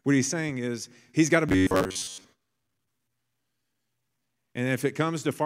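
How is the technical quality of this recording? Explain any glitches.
The recording has one clear glitch, robotic sound from repeated short buffers, between about 1.49 and 2.24 s. Across most of that stretch the speech collapses into a rigid, metallic buzz pitched at 93.8 Hz that still loosely tracks the words. The likely cause is audio arriving too slowly, so the player keeps looping a fragment about 10.7 ms long while fresh audio is skipped. Unlike a stutter or dropout, the repeats lock onto one steady pitch instead of producing gaps or audible jumps.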